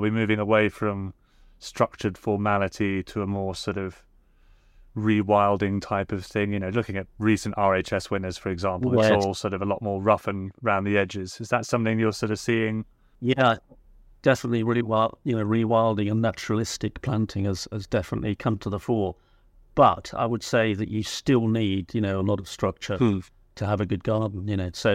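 Speech recording, no technical faults detected.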